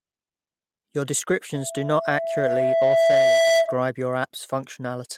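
From 1.54 s to 3.80 s a loudspeaker feedback squeal rises at 663 Hz. The microphone hears its own loudspeaker, and at that frequency the loop gain passes one. Unlike a steady hum, it swells by itself over about two seconds until it sits roughly 10 dB above the speech.

Between 3.62 s and 3.68 s there is a short stall from a late packet. The buffer ran dry, so the last sound is stretched by 30 ms before playback resumes from the same point. Nothing is skipped, unlike a dropout, but the audio then runs about 30 ms later.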